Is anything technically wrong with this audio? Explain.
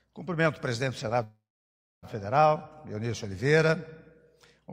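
Yes. A call audio freeze runs from 1.23 to 2.05 s. The last sound smears into a fading buzz, then 0.63 s goes flat on the waveform and blank on the spectrogram. Delayed packets likely drained the jitter buffer. Playback then resumes 0.79 s late, with nothing lost.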